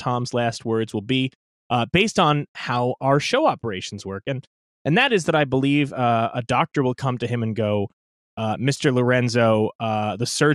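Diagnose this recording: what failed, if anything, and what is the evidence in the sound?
At the codec stage, the speech sounds dull for the whole clip, with a granular, gurgling roughness and the top end coming and going. The likely cause is MP2 compression, with audible damage consistent with a rate around 80 kbps. Too few bits leave upper sub-bands switched off and the remaining ones coarsely quantised. A spectrogram would show a ragged high-frequency ceiling, with blocks of energy above a few kHz flickering on and off frame by frame.

From 7.71 to 7.90 s, just after "come to him and", there is a short burst of burbling over the speech: DAB burbling. This is a transmission-stage fault. Bit errors got past the error correction into the MP2 data. Corrupted samples put short blips of noise in single sub-bands. The span covers about five frames. On a spectrogram it would look like isolated horizontal bands flaring briefly, and the waveform would show small spiky level jumps.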